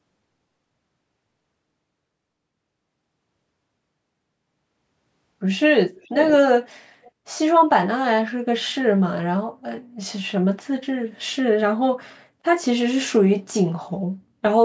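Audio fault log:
5.95–6.37 s and 7.03–7.11 s, echo leak: a delayed copy of the speech comes back about 475 ms after the original. The first is a trailing repeat around 10 dB below the talker. The second is a brief, faint scrap roughly 30 dB down. This is likely a loudspeaker-side echo canceller letting part of what its microphone picked up slip through, so the sound returns after that fixed round-trip delay.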